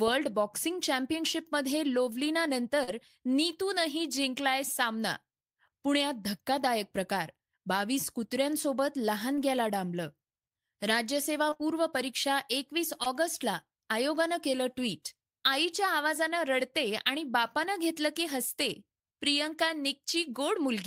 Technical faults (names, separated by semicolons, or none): short concealed packet loss